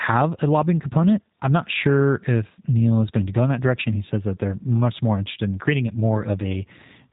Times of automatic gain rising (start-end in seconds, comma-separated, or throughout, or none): none